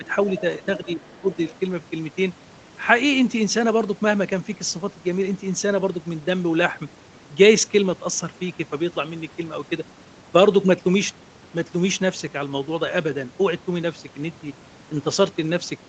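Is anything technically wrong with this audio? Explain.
Yes. In the first second and a half, an echo canceller is struggling with both sides talking at once.

Speech suppressed in double talk appears twice: briefly at the very start, from 0 to 0.04 s, and again from 0.78 to 1.29 s. The likely cause is the echo canceller failing to separate the near talker from loudspeaker echo and turning everything down. The speech dips in level, by roughly 10 dB at the start and up to around 15 dB later, with about a third of a second affected in the second stretch.

The other side's voice leaking through occurs from 0.76 to 0.93 s and from 1.33 to 1.55 s. This is likely residual echo: the far end played on the talker's loudspeaker, picked up by the microphone and not fully cancelled. It sits well below the main speech, roughly 25 dB down, as faint scraps of a second voice. The Opus call path caps everything near 8 kHz.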